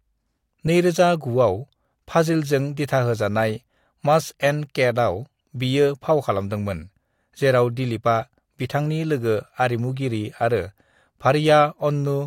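No technical faults are audible.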